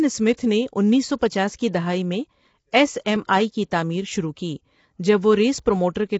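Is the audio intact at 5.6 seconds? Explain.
No. At 5.59 s there is a small jump in the speech, a dropped buffer (overrun). The program likely failed to collect its samples before the hardware overwrote them, so a few milliseconds of audio vanish and the two sides butt together with no gap.

The speech at that moment is also rough and grainy, with noise between the harmonics and a lowered or synthetic top band. This is plainly audible low-delay AAC compression, which fits AAC-ELD at 24 kbps, whose short frames resolve pitch harmonics poorly.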